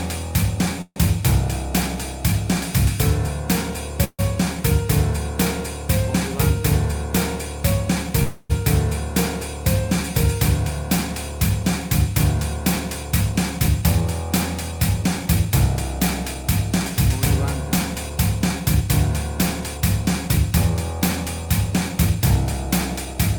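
The audio has three call audio freezes, at 0.81 to 0.98 s, 4.04 to 4.21 s and 8.23 to 8.52 s. In each, the last sound carries on as a fading buzz or hiss. The first two end in brief silence. The likely cause is delayed packets draining the jitter buffer. The audio then resumes where it stopped, so nothing is lost and the delay grows. Four jitter buffer speed-ups follow, at 13.03 to 14.02 s, 14.71 to 16.90 s, 17.95 to 18.89 s and 19.74 to 23.37 s. There, short pitch-period pieces are cut repeatedly to shrink the delay. The sound runs 4 to 7 percent fast at unchanged pitch and sounds hurried in the stretches at 105 percent or more.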